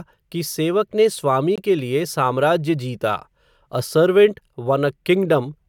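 At 1.56 s, corrupted bits in the compressed stream caused the decoder to reject data and the player to substitute silence, a corrupt frame muted. The speech cuts to an abrupt 22 ms hole ending at 1.58 s, which fits two short frames, while timing stays intact.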